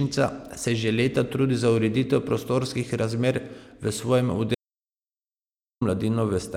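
At 4.55 s the speech cuts off abruptly into silence, with no room tone, until it resumes mid-flow at 5.81 s, so about 1.27 s is simply missing. This is an audio dropout to silence, likely from the input being lost while the recorder kept writing zeros.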